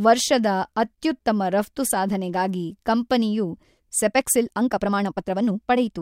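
From 4.06 s to the end, after "ಅತ್ಯೂತ್ತಮ ರಪ್ತು ಸಾಧನೆಗಾಗಿ ಕಂಪನಿಯು", the speech abruptly runs about 1.53 times faster. The pitch does not rise with it. The delivery turns rushed. This is a time-stretched section, likely from software squeezing the passage to fit a shorter length. It holds the pitch by dropping short slices of audio.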